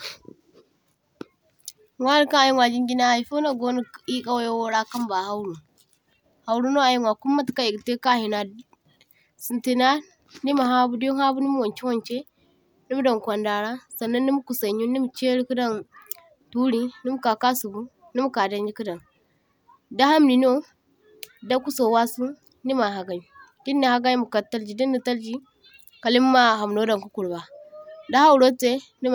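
Listening closely to the speech, nothing stood out as a technical problem at any point.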